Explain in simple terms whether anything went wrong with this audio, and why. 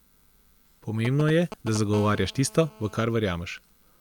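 Two kinds of interference from a nearby 2G mobile phone cut into this speech.

From 1.05 to 1.77 s there are GSM signalling bursts. The phone sends short groups of radio pulses, as it does before a call or text comes in. The recording circuit picks these up and turns them into sound. You hear a galloping dit-dit-dit of short buzzes. They are fairly loud against the speech.

From 1.94 to 3.00 s comes GSM phone buzz. This time the phone is transmitting steadily, as during a call. It pulses about 217 times a second, and the circuit turns each pulse into a click. Together they make a hard, raspy, steady buzz. It has nothing to do with the speech and sits quietly underneath it.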